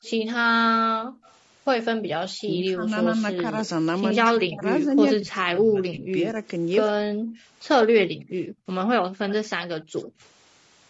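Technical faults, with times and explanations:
Throughout: low-delay AAC compression. The speech has a rough, grainy texture, with noise filling the gaps between pitch harmonics and a top band that sounds thinned and somewhat synthetic. The likely cause is AAC-ELD at about 32 kbps. Its short frames give poor frequency resolution, so harmonics smear and the coder spends bits inefficiently. The damage is plainly audible and continuous. That separates it from the brief, localised smear of a lost frame.
0.03–0.1 s, 1.23–1.37 s and 9.29–10.1 s: echo leak. A faint delayed copy of the speech trails the original. In the first two places it lags by 120 ms and is very low, about 30 to 35 dB down. In the last it lags by 75 ms and is louder, about 20 dB down. The likely cause is a far-end loudspeaker whose echo canceller left residue that was sent back. It is a repeated copy of the speech, not a dip or a gap.
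0.52–1.23 s and 8.08–10.23 s: background gated by the echo canceller. The room sound suddenly falls away and then returns. It drops by up to 40 dB in the first stretch and by 30 dB in the second. The dips add up to roughly half a second in the first and under a second in the second. The canceller clamps the microphone while the loudspeaker plays. Only the ambience vanishes; nothing smeared or repeated is added.
2.46–7.17 s: speech suppressed in double talk. Across this span the talker's speech repeatedly sinks, by as much as roughly 30 dB, losing level and brightness in pieces that total around three seconds. The likely cause is both sides talking at once, with the echo canceller unable to separate its own talker from the loudspeaker echo and turning everything down. Unlike background gating, it is the foreground speech itself that ducks.
5.55–5.58 s: AAC frame loss with concealment. A single lost 20 ms frame leaves a brief smeared, noisy or phasey patch. 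The decoder rebuilt it from the last good spectrum instead of leaving silence. Because the gap is so short, there is no fade to silence. This is a tiny glitch inside the suppressed span, distinct from the longer level dips around it.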